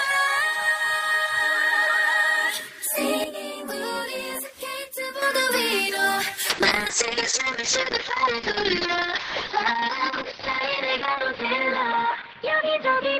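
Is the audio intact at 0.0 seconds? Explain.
Yes, at 0.0 seconds the audio is intact, with no dropout, click, distortion or other fault at that point.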